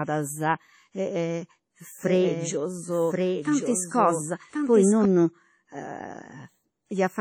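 Throughout the speech there is heavy WMA compression damage: ringing, washy tones and a hiss that breathes with the signal. The quantisation noise smears across tens of milliseconds and weak components drop out, which fits a likely 32 kbps WMA encode.

From 2.03 s to 5.05 s a doubled audio track runs: a full-band copy of the speech about 5 dB quieter trails the original by about a second, with no decay or room colour, and starts and stops abruptly. A second, slower capture path or an edit holding two offset copies is the likely cause.

At 3.42 to 3.45 s, pre-echo puts a short hiss of about 28 ms ahead of an attack, which sounds smeared. The transform block spread noise sized for the loud attack into the quiet moment before it.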